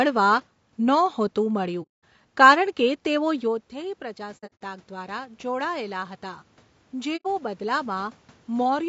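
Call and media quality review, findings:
Low-delay AAC compression, whole clip: rough, grainy speech with noise between harmonics. Spectrogram shows smeared harmonics and a thin top band. Likely AAC-ELD at a low rate, around 32 kbps.

AAC frame loss with muting, 1.82–2.04 s, 4.37–4.62 s and 7.16–7.26 s: soft-edged dropouts. The waveform tapers to silence, and the spectrogram shows full-band blank columns. The decoder zeroed the spectrum of the lost frames. The first gap is about 210 ms. The second is broken gaps over 240 ms, the longest roughly 70 ms. The last is about 90 ms.

Automatic gain rising, 3.23–8.77 s: speech and room noise swell together as the AGC adds about 7 dB. This follows a level drop of about 13 dB when the talker moved away near 3.5 s. The waveform envelope and the noise floor climb slowly.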